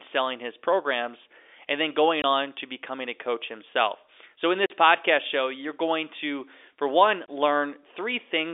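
Packet loss filled with silence cuts hard gaps at 2.22–2.24 s after "programs and then going", 4.66–4.70 s before "podcast show you're going", and 7.26–7.28 s after "going to for one". The 20 ms and 40 ms lengths suggest whole 20 ms packets replaced by silence over the telephone-band line.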